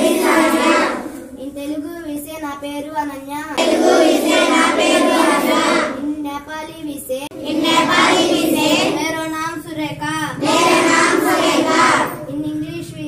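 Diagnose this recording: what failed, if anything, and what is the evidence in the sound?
CD skip at playback. Mutes at 3.57 s and 7.27 to 7.31 s, then jumps. The laser left its track for another spiral turn.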